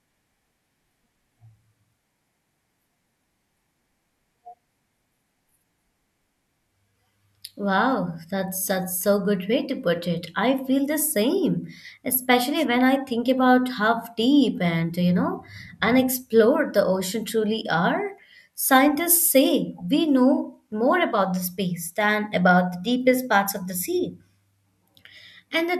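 At 12.56 s there's a wireless microphone noise hit lasting about 90 ms, to 12.65 s. The FM radio link briefly faded as reflected signals cancelled, so receiver noise surged up and you get a quick swish of static over the speech.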